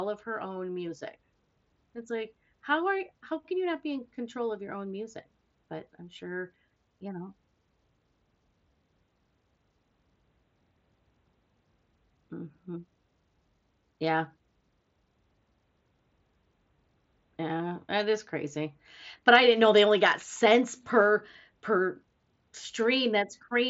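Nothing stood out on listening to this speech recording, which comes through a Bluetooth mSBC headset link with its content limited to the usual wideband range of about 8 kHz.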